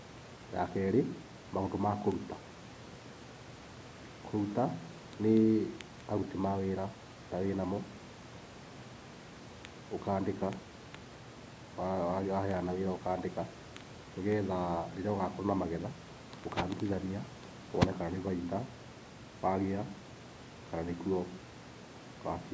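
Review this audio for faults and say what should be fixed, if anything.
Nothing stood out on listening to this speech, so there is nothing here that needs fixing.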